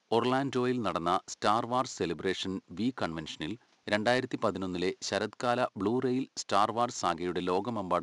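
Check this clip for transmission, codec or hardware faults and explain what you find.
One codec fault runs through the whole clip. From start to finish, 4-bit ADPCM compression encodes each sample as a coarse step from a predicted value, which fits a bitrate near 89 kbps. The resulting error adds gritty hiss that rises and falls with the speech and roughens sharp onsets. On a spectrogram, this appears as broadband noise filling in under loud syllables. The room noise, about 42 dB below the speech, sits beneath it.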